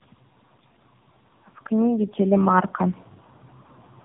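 From start to finish the speech carries tandem speech coding. It sounds as if three low-rate speech coders ran in a row, each re-coding the last one's damaged output. The result is rough, muffled and warbly. Nothing reaches above 3.7 kHz, which fits narrowband AMR bridged by G.711 links.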